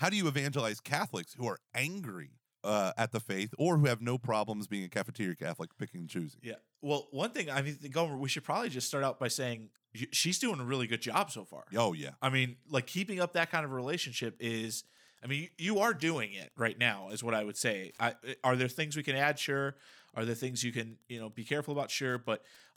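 From 14.27 s to the end, right after "up that kind of", Wi-Fi interference appears under the speech. A Wi-Fi radio sits close to the audio circuitry. Its beacon transmissions leak into the circuit, which rectifies them into audible clicks. The beacon repeats every 102.4 ms, so the result is a steady ticking just under ten times a second. It is faint, roughly 40 dB below the speech.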